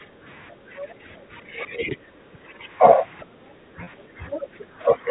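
A speech clip with echo-canceller trouble throughout. From 0.06 to 0.70 s, the background is gated by the echo canceller, dipping by about 9 dB for roughly a third of a second in total. Faint speech from the other side leaks through at 0.49 to 0.95 s, 3.20 to 3.26 s and 3.99 to 4.65 s, about 15 to 30 dB under the main talker, likely residual loudspeaker echo. The talker's speech is likely suppressed in double talk from 1.42 to 2.66 s, dropping as much as about 15 dB. It happens again from 3.48 s to the end, dropping about 10 dB, likely as the canceller turns down both voices at once. At 3.84 to 3.87 s, one 30 ms packet is lost and bridged by pitch repetition, giving a brief held, buzzy sound.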